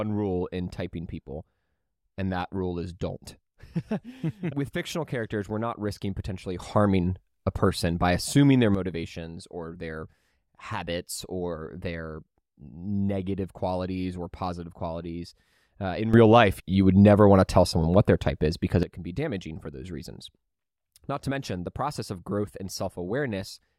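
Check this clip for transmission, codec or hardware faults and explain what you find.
Two faults of the same kind stand out in this speech clip.

A sudden gain jump occurs twice: from 6.60 to 8.75 s, just after "we're not risking potentially", the level rises by about 9 dB, and from 16.14 to 18.83 s, just before "it can be damaging", by about 12 dB. Each time the speech and background noise step up together and drop back at the end. This is likely a digital gain setting applied abruptly, with no ramp.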